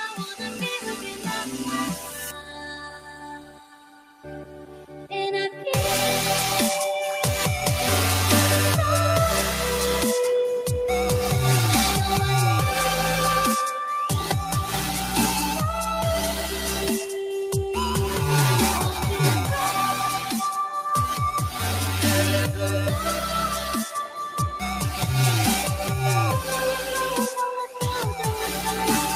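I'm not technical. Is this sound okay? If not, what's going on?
No, not quite. A noise suppressor built for speech was applied to music or sounds here, and it's been left running the whole way through. It treats steady tones, ambience and lingering tails as if they were background hiss and keeps pulling them down, so the level wobbles gently and held sounds feel a bit thinner and less full than they should, while sharp hits mostly get through untouched.

On top of that, there are specific spots where you can hear sound cut by the noise suppressor, with the level sinking noticeably: about 0.11 to 0.6 seconds, 0.79 to 1.25, 1.96 to 4.26 (the longest and deepest, around two seconds), 4.45 to 5.12, a brief moment at about 20.2 to 20.35, and 23.6 to 24.6. In each, the steadier or fading part of the sound drops away or gets cut short.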